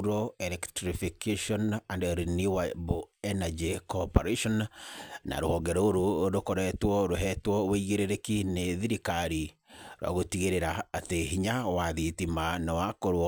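A gritty, inharmonic fizz rides on the speech from start to finish, strongest on loud and bright sounds and sitting roughly 25 dB below them. This is crude rate conversion: samples were simply repeated rather than filtered, which fits a step from 32 kHz to 48 kHz.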